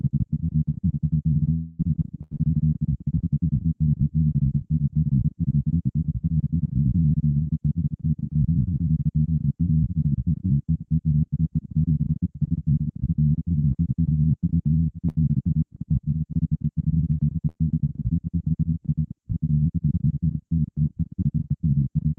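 From 1.53 to 1.81 s the audio stops advancing for roughly a quarter of a second and is replaced by a smeared continuation of the last sound that fades. No true silence appears. This is most likely a long network dropout, with about 260 ms never delivered. On a spectrogram the harmonic or noise pattern freezes into flat horizontal streaks that dim, and the waveform envelope decays before it jumps to new material.

Shorter bursts of packet loss follow at 2.23 to 2.33 s (about 80 ms), 15.09 to 15.17 s, and 17.49 to 17.57 s (about 60 ms each). In each gap the receiver stretches the preceding sound into a brief held buzz or hiss that drops in level, and then the audio resumes with a small piece skipped. A spectrogram shows short frozen, fading bands ending in an abrupt change, with the energy topping out near 12 kHz, as the call codec does throughout.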